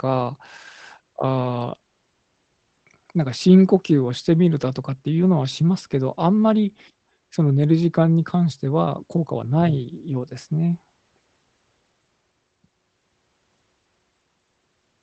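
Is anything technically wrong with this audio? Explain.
No, nothing is technically wrong.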